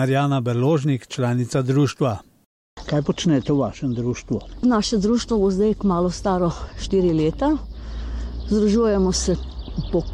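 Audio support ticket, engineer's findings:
No audible fault found on listening: signal level, continuity and tonal balance hold steady throughout, with no event pointing to a failing component in the chain.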